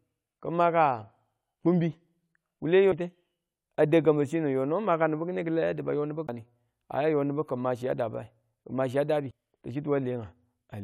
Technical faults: CD skip

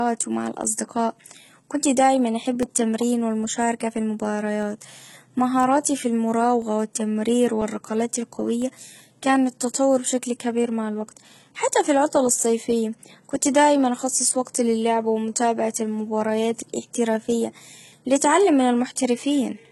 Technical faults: HE-AAC compression; periodic USB or driver dropouts

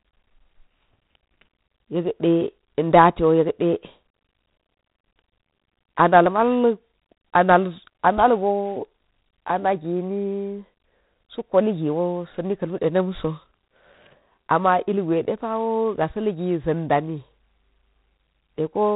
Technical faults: G.726 ADPCM

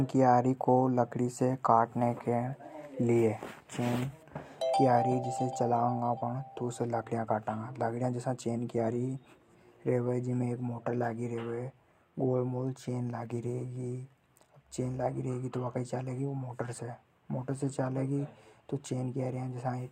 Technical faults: none

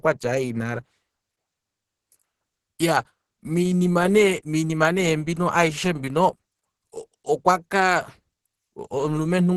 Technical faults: Opus compression

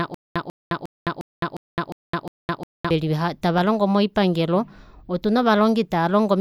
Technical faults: stutter with silent gaps

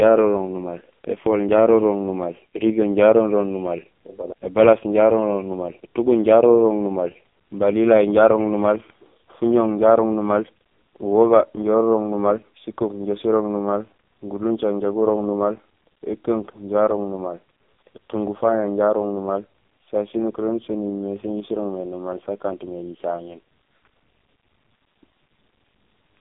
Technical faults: AMR narrowband mobile codec

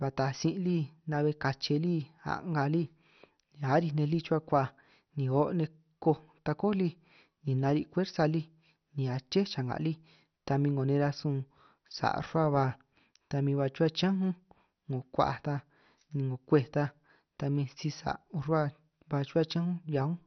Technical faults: MP2 compression

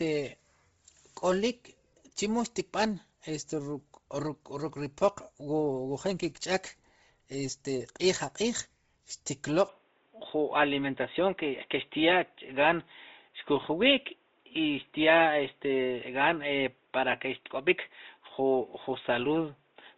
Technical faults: Bluetooth LC3 compression; input switched to a poorer device

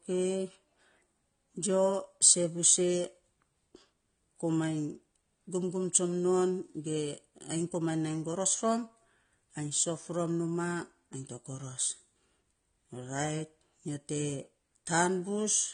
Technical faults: AAC compression

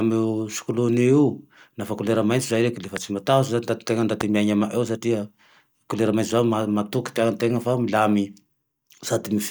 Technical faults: loud pop

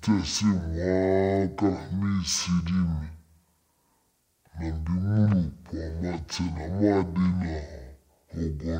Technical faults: stereo read as mono

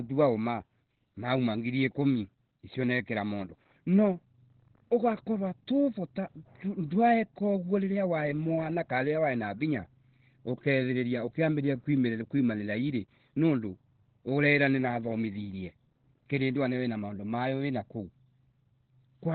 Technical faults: Opus compression

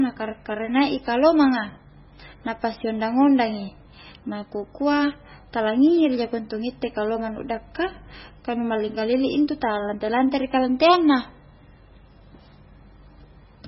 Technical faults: MP3 compression

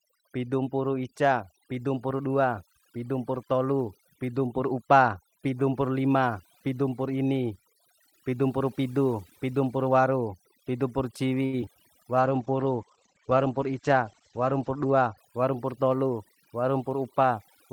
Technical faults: overdone noise removal; short stall from a late packet; short concealed packet loss; call bitrate drop; jitter buffer speed-up

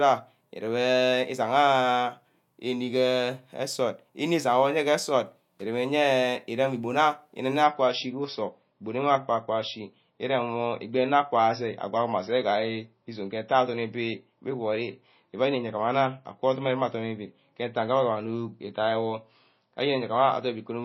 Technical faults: adaptive stream at a lower bitrate

